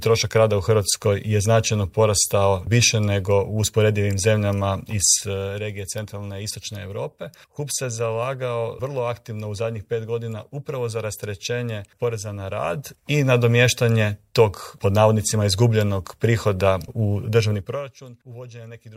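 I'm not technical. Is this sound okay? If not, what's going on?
Yes, the sound is fine; nothing in it points to a technical problem with how it was recorded, processed or played back.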